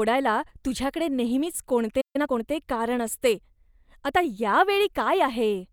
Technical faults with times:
2.01-2.16 playback stall
2.16-2.42 time-compressed catch-up

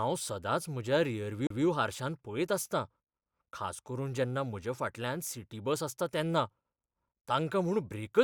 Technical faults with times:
1.47-1.50 CD skip

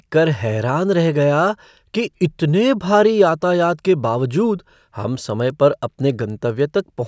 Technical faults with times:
5.00-7.08 resampler restarted on every block

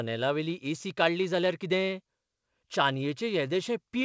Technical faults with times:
none

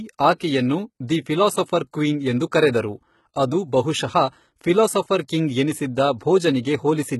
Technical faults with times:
0.00-7.20 HE-AAC compression

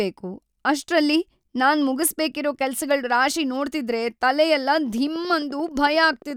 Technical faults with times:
4.98-6.31 train of clicks

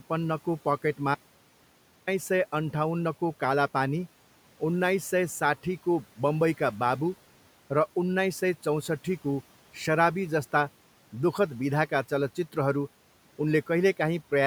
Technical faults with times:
1.15-2.07 audio dropout to a faint residue

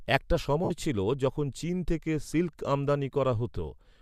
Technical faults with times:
0.64-0.71 lost LE Audio frames

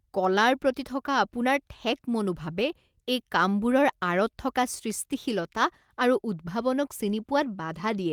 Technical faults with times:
7.07 lost packet rebuilt from error correction

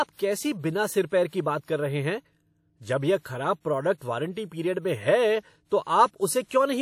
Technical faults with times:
0.00-6.82 WMA compression
1.65-1.68 pre-echo

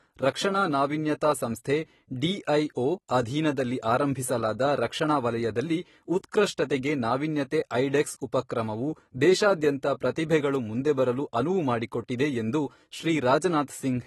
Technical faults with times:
0.00-14.07 AAC compression

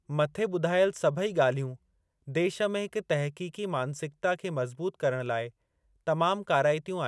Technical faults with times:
none

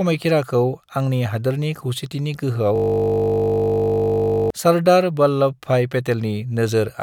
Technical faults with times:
2.76-4.50 system hang loop

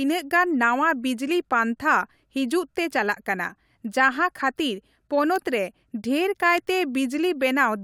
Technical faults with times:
5.36 bit error spike
6.58 bit error spike

